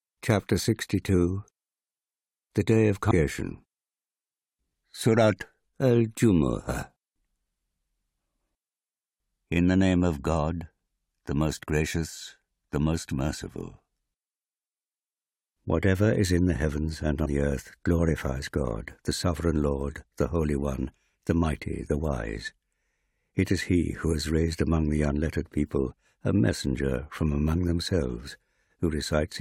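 At 3.10 s and again at 17.24–17.26 s, between "in the heavens and" and "the earth glorifies", damaged data in the compressed stream makes the decoder lose sync, producing brief disruptions seen as broadband vertical smears and jagged waveform glitches.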